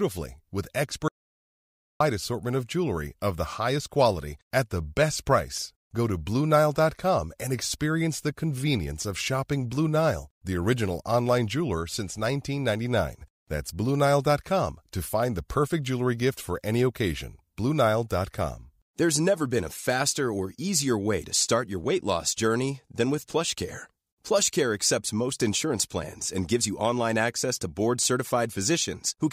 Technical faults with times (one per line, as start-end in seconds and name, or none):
1.08-2.00 audio dropout to silence